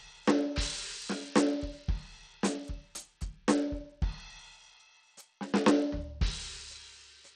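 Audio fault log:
throughout  Bluetooth SBC compression: The music carries a gritty, grainy edge, and its top end is thin and unsteady, with treble that fades in and out instead of holding. This is likely a Bluetooth link using SBC at a low rate, which fits around 80 kbps. Splitting the audio into a few wide bands with crude bit sharing starves the upper bands and quantises the rest coarsely, leaving audible noise and aliasing on the music.
0.32–7.21 s  clock slip clicks: Faint, evenly spaced ticks run through almost the whole clip, one roughly every 0.4 s, about twenty in all, and they stand out most on sustained and bright passages. The likely cause is two devices running on unsynchronised clocks that differ by something like 70 ppm, so each time the drift reaches a full sample, a single sample is dropped or repeated, leaving a tiny step in the waveform.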